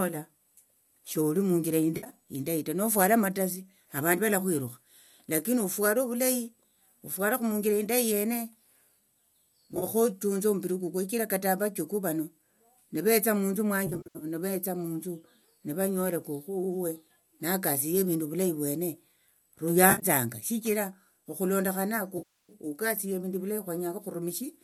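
AAC frame loss with concealment appears at 1.97–2.13 s, between "sholi munjira" and "indayi ta nofuala", then at 9.72–9.84, 13.87–14.25, 19.90–20.06 and 22.18–22.53 s. The decoder patches missing audio from the last good spectrum, leaving smeared, noisy, phasey stretches, longest at 13.87 and 22.18 s.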